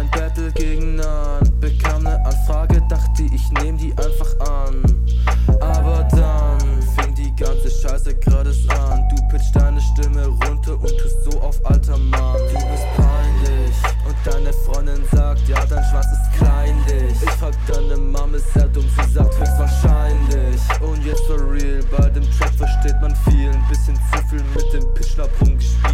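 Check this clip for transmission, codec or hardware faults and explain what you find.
Nothing in the transmission path, codec or hardware needs flagging here.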